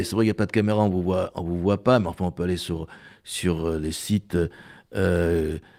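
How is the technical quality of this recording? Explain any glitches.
Nothing stood out as a technical problem on listening to this speech recording.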